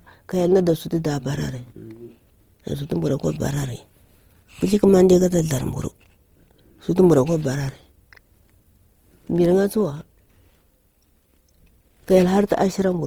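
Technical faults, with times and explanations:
Throughout, Opus compression. The speech sounds rough, grainy and noisy for the whole clip, and the damage is plainly audible. The likely cause is Opus coding in its music (CELT) mode. Short of bits, the encoder keeps each band's energy but fills in detail with folded copies of lower bands or with noise. So there are few holes or swirls, just a coarse texture. Bandwidth stays full, up to 20.2 kHz. The damage fits a rate near 24 kbps.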